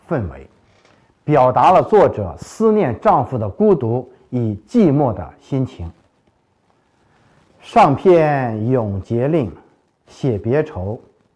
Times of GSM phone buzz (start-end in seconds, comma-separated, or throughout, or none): none